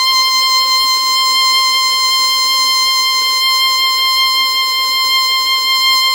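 No technical faults can be heard anywhere in this music clip; the signal stays continuous and intact throughout.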